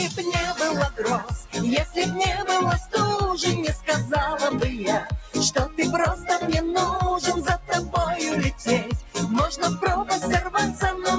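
Across the whole clip the level breathes and pumps, with sustained parts sinking and sharp onsets holding up, so the sound thins out and flutters by around 10 dB from moment to moment. This is a noise suppressor applied to music or sounds. A speech-oriented suppressor stayed active and kept mistaking steady tones and decaying tails for background noise, pulling them down while letting transients pass. The audio also came through call microphone processing, with nothing above 8 kHz.

Three moments sink further than the surrounding audio: from 1.19 to 1.56 s the level drops by about 12 dB, from 5.0 to 5.35 s by about 13 dB, and from 9.02 to 9.17 s by about 14 dB. Each is sound cut by the noise suppressor. The processing judged these stretches to be noise and attenuated them hardest, clipping their sustain and decay short while anything abrupt within them survived better.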